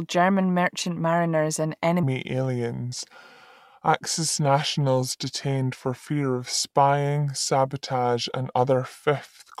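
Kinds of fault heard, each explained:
Section at the wrong speed: from 2.03 s onward the speech turns deeper, about four semitones down, and slower at 0.79 times, likely from a mismatched playback clock.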